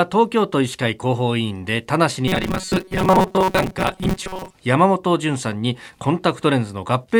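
Robotic sound from repeated short buffers runs from 2.28 to 4.56 s. The likely cause is audio arriving too seldom, so roughly half the time is filled by looping a slice of about 5.3 ms. That loop imposes a fixed 188 Hz metallic buzz that only loosely tracks the speech.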